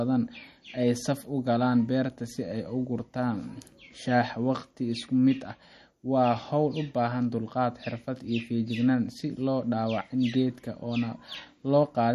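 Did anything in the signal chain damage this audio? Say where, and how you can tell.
Yes, at the codec stage: throughout the speech, nothing exceeds 12.5 kHz and weak detail turns watery, likely MP3 compression at a starved bitrate, perhaps around 40 kbps.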